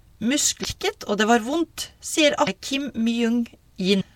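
A speech recording with three brief bursts of damaged data in a compressed stream: at 0.61–0.65 s just before "og det var vondt", at 2.44–2.49 s right after "det var vondt sier", and at 4.00–4.02 s. Corrupt bytes make the decoder misread frames and lose sync, producing short glitches. On a spectrogram each appears as a thin vertical disruption; the waveform shows an abrupt, jagged discontinuity.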